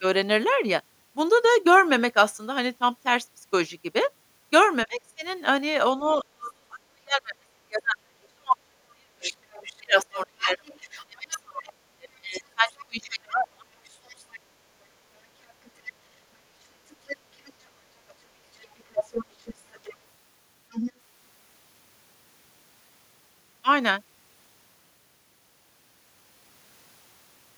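From 4.86 to 13.71 s the talker's speech is suppressed in double talk: for roughly seven seconds in total it dips, dulls and breaks up, at worst by around 35 dB. The likely cause is an echo canceller that couldn't tell near speech from loudspeaker echo and attenuated both. Within and after that stretch, the other side's voice leaks through at 9.22–11.40, 12.32–12.84, 13.84–14.40, 15.48–15.92 and 16.90–20.92 s. It sits roughly 10 to 30 dB below the talker, faint in the short scraps and most audible in the last stretch, likely from far-end playback the canceller didn't fully remove.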